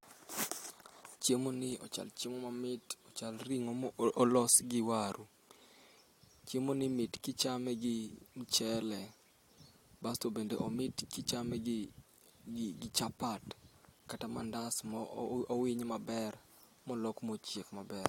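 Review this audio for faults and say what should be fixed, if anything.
Nothing should be fixed, as no faults turned up in this audio.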